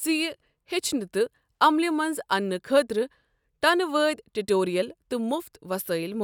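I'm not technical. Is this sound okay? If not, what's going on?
Yes, there are no audible technical faults anywhere in this speech recording.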